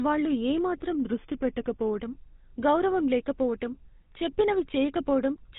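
Speech runs entirely through the GSM full-rate codec. The band stops at about 3.8 kHz, so sibilants and breath lose their upper edge. The voice carries the buzzy, gravelly roughness this codec produces, because it rebuilds speech from a vocal-tract filter excited by a coarse, regularly spaced pulse train. That character matches a 13 kbps full-rate stream, and the damage is plainly audible rather than subtle. From 0.95 s to 2.03 s, just after "వాళ్లు ఏ మాత్రం", playback slows by about 5.5 % and the pitch drops by roughly 98 cents, close to a full semitone. At 2.03 s both speed and pitch snap back to normal. This sudden detuning and recovery is likely a drift correction step, where clock-matching software briefly changed the playback rate in one jump to rebalance its buffer.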